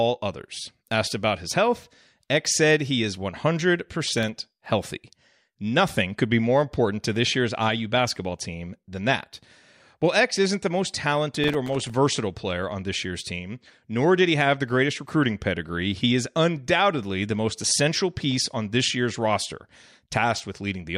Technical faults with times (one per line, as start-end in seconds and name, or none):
4.12-4.66 processor overload crackle
11.44-11.90 processor overload crackle